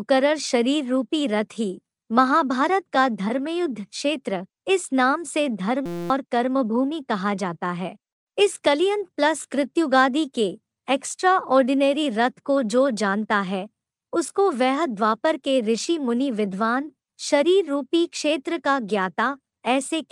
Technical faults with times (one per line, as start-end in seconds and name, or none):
5.86-6.10 system hang loop